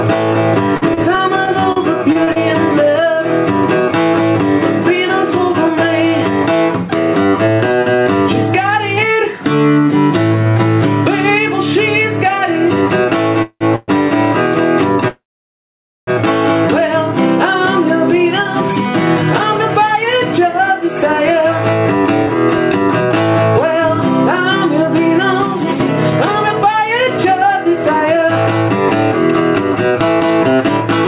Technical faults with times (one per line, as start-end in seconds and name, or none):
0.00-31.07 gain pumping
0.77-2.39 repeated packet loss (robotic sound)
13.42-13.91 call audio freeze
15.08-16.10 call audio freeze
18.12-30.69 jitter buffer speed-up